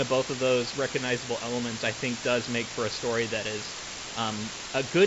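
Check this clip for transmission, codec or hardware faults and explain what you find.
One fault runs through the whole speech clip, carried over a G.722 wideband path whose bandwidth stops near 7.7 kHz. Low bit depth with dither is present throughout: a constant, even hiss, with noise almost as loud as the speech, which fits roughly 4-bit resolution. Dither randomises the rounding error into steady white noise instead of distortion.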